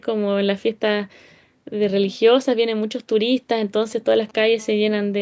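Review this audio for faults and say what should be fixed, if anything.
From 3.82 to 4.40 s, a galloping dit-dit-dit of short rasping buzzes cuts across the speech, sitting roughly 25 dB below it. These are GSM signalling bursts. A nearby 2G phone was exchanging brief control transmissions with its network, not carrying a call, and the audio circuit rectified those radio pulses. Each group therefore comes through as a clipped fragment of buzz at a 217 Hz repetition rate, spaced irregularly rather than continuously.

From 4.59 to 5.17 s, a hard, raspy, continuous buzz appears. It is steady at 217 Hz, rich in harmonics, sits about 33 dB below the speech, and has no relation to what is being said. This is GSM phone buzz. The same kind of handset was now in an active call, transmitting its time-slot bursts 217 times a second without a break. The rectified pulse train is an unbroken tone whose sharp edges spray harmonics up through the band, which is limited to 8 kHz by the call's microphone processing.

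To prevent both, keep 2G handsets well away from the microphone, cables and preamp, or switch them to flight mode, and use shielded, properly grounded cabling with RF filtering at the inputs.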